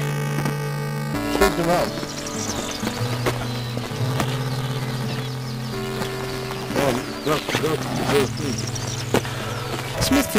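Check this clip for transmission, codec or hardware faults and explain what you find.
Yes, there is a hardware-side fault: buffer tearing runs through the whole clip. Writer and playback pointer have drifted into each other, so about a tenth of every 345 Hz period, which fits a 128-sample buffer, carries audio roughly 10 ms stale. That gives a constant robotic buzz under signal, with a 345 Hz comb and harmonics on a spectrogram and a regular notch of discontinuities in the waveform.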